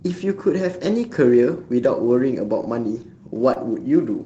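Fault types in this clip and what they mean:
short concealed packet loss: about 20 ms of the call's audio missed the decoder, so the receiver stretched out the preceding sound, leaving a brief smear near 3.53 s.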